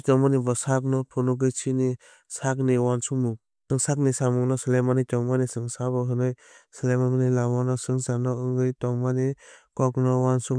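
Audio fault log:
No faults heard anywhere in this speech recording.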